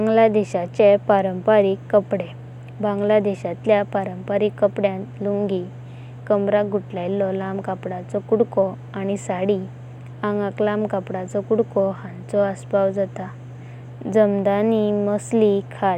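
No technical faults are audible anywhere in the recording.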